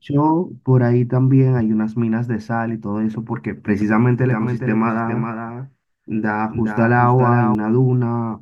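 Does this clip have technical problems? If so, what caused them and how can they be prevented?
Yes. From 4.31 to 7.55 s there is a doubled audio track: a full-band copy of the speech trails by roughly 0.4 s, about 5 dB quieter, starting and stopping abruptly. It was likely captured a second time by a slower path. On a spectrogram, each speech pattern repeats shifted right. Route the signal through a single capture path.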